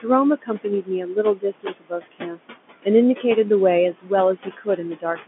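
Speech over a telephone-band line, with noise suppressor artifacts throughout: the background is pulled down by about 19 dB between phrases and rises back under them. Speech cut by the noise suppressor occurs at 0.42 to 2.40 s, 3.93 to 4.11 s and 4.36 s to the end, where the suppressor misjudges quiet speech as noise and drops it by about 22, 18 and 21 dB, swallowing roughly a second of material in the first stretch and shorter fragments in the others. The room noise sits about 12 dB below the speech.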